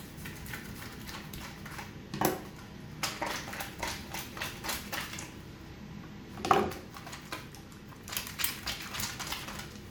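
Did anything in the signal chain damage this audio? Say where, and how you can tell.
No, nothing in the chain damaged it.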